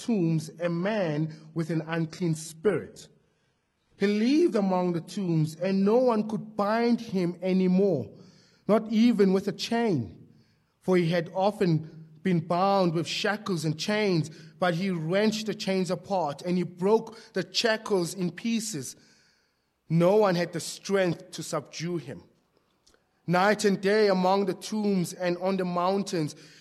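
From 0.0 to 6.0 s the audio is an adaptive stream starting at a low bitrate: treble is missing above about 11.8 kHz, artefacts are stronger, then quality jumps cleanly without a gap.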